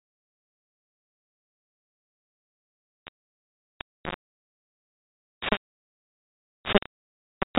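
It's a speech clip that's been hit hard by what sounds like low bit depth without dither: the whole thing is coarse and gritty, with a rough grain that tracks the talking and sits about as loud as the speech itself. That level of crunch likely comes from rounding to just 3 bits. Separately, there's one packet loss filled with silence at 6.78 s, a hard-edged hole of about 30 ms, which points to a single dropped packet. The telephone-style G.711 band limit underneath adds only faint damage of its own.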